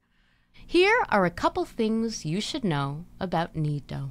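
No technical faults can be heard anywhere in the recording; the signal stays steady and intact throughout.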